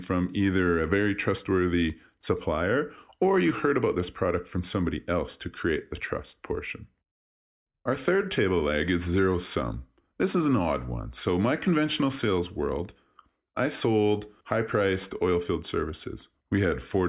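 No technical faults occur at any point in the speech.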